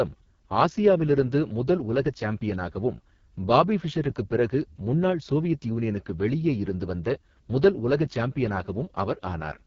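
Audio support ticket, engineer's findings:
AMR wideband (HD Voice) codec, heavy damage, whole clip. Speech rough and raspy throughout, consistent with the lowest AMR-WB mode, around 6.6 kbit/s. Pulse-driven vocal tract model starved of bits. Spectrogram: detail thins above 6.4 kHz into a diffuse noise band, hard ceiling at 7 kHz, smeared harmonics below.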